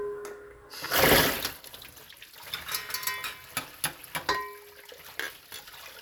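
Nothing in these everyday sounds gives a listener anything to flag as a technical fault.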